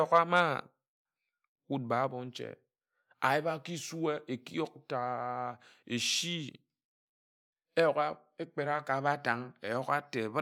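No technical faults can be heard anywhere in the recording; the speech signal stays continuous and stable throughout.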